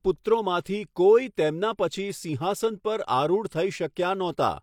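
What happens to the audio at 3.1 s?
Nothing goes wrong at 3.1 s; the speech carries on intact through that moment, with no dropout, click or distortion to be heard.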